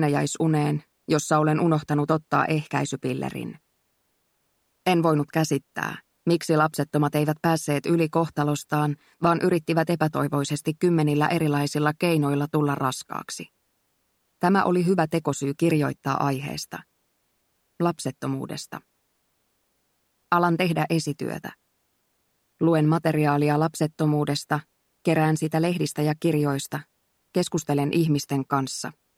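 No technical faults can be heard anywhere in this audio.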